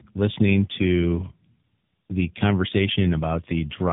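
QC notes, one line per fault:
Throughout: tandem speech coding, two AMR-NB passes bridged by G.711 A-law; each recoding degrades the previous output, leaving rough, warbly speech with nothing above 3.8 kHz.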